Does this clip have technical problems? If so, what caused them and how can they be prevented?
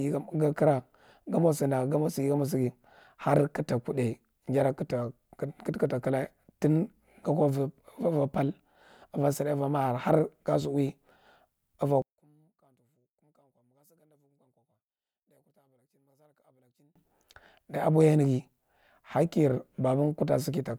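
Yes. From 12.02 s to 16.96 s, the likely cause is one channel inverted: one side of the stereo pair had its polarity flipped, so when the two channels are summed to mono, everything they share cancels out. The centred speech drops by about 38 dB and nearly vanishes, leaving only a faint trace of whatever differed between the two sides. To prevent it, check polarity on every channel and monitor a mono fold-down before release.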